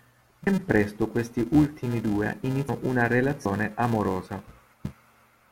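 A steady buzz runs through the whole speech clip. It comes from a filter restarted on every block. The filter drops its state and begins each block from silence, adding a small transient. These ticks repeat at 375 Hz, which fits 128-sample blocks, and rise and fall with the speech level.

Compressed frames are skipped four times. At 0.47 s, just before "presto questi ultimi due", about one frame is lost, roughly 100 ms. At 2.69 s, right after "presto questi ultimi due", about seven frames vanish, around half a second. At 3.46 s about two frames go, roughly 150 ms. At 4.74 s about three frames go, roughly 300 ms. Each jump fits a frame length of 85.3 ms.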